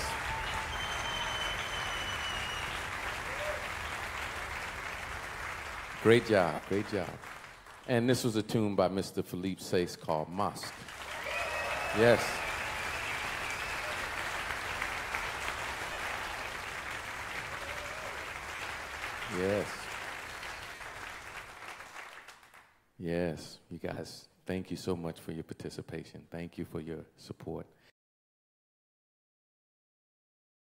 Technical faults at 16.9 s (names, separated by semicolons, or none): none